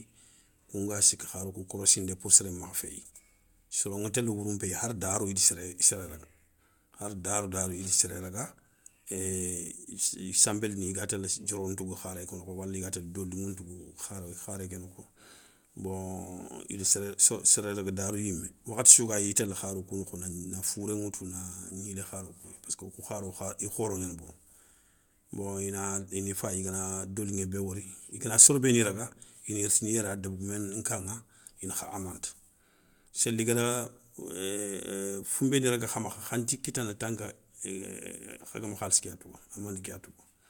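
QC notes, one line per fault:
No fault found, so there is nothing to note for QC.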